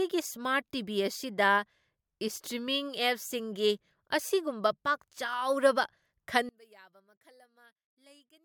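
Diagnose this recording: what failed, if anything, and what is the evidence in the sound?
From 6.49 s onward the speech nearly vanishes, falling about 32 dB. The likely cause is one channel inverted in the analogue wiring, so the shared signal cancels when summed to mono.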